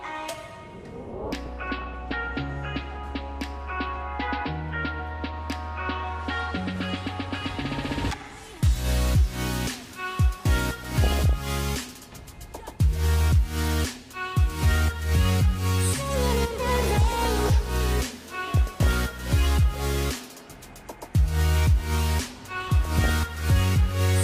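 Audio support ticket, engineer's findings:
Short noise blips, individual frequency bands jumping in level for an instant. DAB burbling at 1.46–2.14 s, 6.76–6.83 s, 10.81–11.33 s, 16.76–17.49 s, 18.57–18.93 s, 22.65–23.10 s. Component: DAB receiver, weak reception. Mechanism: residual bit errors, well under 1%, slip past error correction into the MP2 stream. Corrupted samples and scale factors make single sub-bands spike frame by frame, giving the burbling.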